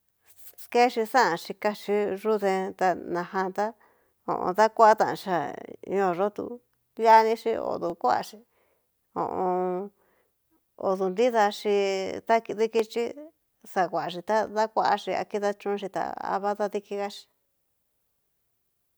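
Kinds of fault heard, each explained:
Dropped samples: three sharp single clicks in the speech, at 7.90 s, 12.80 s and 14.47 s, each showing as a thin vertical line across the whole spectrum. The likely cause is a tiny gap in the sample stream, about 0.7 ms each time, so the waveform leaps straight from one value to a later one. That sudden step is too brief to remove any audible sound, but its abrupt edge is heard as the click.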